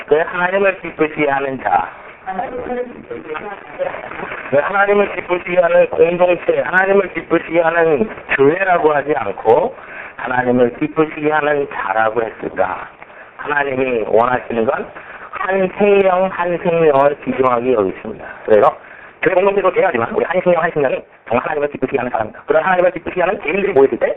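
From 18.57 s to the end there's a time-stretched section: it suddenly runs about 1.84 times faster at the same pitch, rushed, likely from software dropping short chunks.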